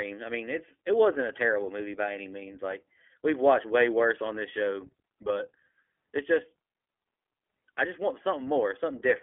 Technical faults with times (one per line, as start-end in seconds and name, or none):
0.00-9.22 iLBC codec